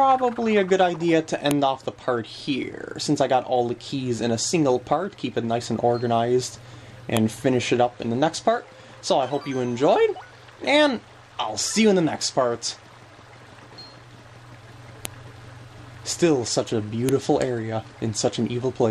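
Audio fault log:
1.51 s, 7.17 s, 15.05 s, 17.09 s: file header played as audio. Each is a sharp, loud click where a new piece was joined without stripping its header, so those bytes play as samples. A waveform shows a single tall spike; a spectrogram shows a thin full-band vertical line.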